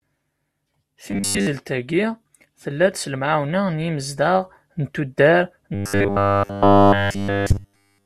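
From 1.11 to 1.47 s the speech collapses into robotic sound from repeated short buffers, a rigid metallic buzz fixed at 100 Hz, which points to a 10 ms slice being replayed because fresh audio likely arrived too seldom. Most of that stretch is repeats. The same fault returns from 5.75 s to the end, now entirely repeated. Unlike an audible stutter, the repeats are too short to hear individually and fuse into one steady pitch.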